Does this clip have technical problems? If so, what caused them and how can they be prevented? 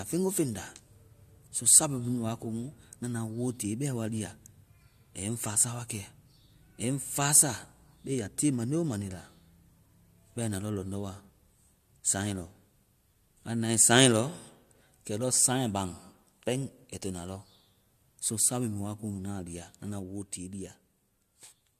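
No, nothing technical goes wrong anywhere in this recording, so there's no cause to track down and nothing you need to prevent.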